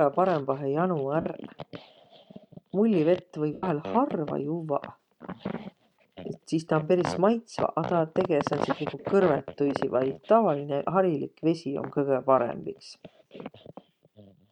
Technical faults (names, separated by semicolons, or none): lost LE Audio frames